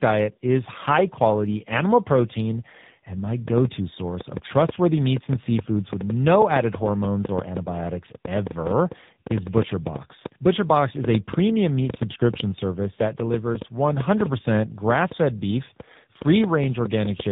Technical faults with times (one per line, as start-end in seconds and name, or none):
0.00-17.32 tandem speech coding
3.48-17.21 train of clicks